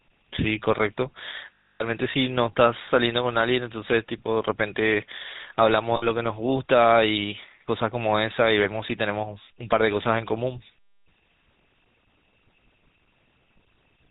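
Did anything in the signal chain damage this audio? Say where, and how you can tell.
Yes. The codec stage left a buzzy, gravelly roughness on the speech for the whole clip, with nothing above 4 kHz. That points to the GSM full-rate codec at around 13 kbps. Its pulse-driven vocal-tract model coarsens the excitation, so this is more than a plain telephone band-limit, which would leave the voice smooth.

On the network side, lost GSM frames cause a rough, metallic ring at 1.59 to 1.83 s (about 260 ms), 5.96 to 6.05 s (60 ms) and 8.64 to 8.68 s. The decoder repeats the last good frame at falling level, so the sound smears and rings instead of cutting cleanly to silence as a plain dropout would.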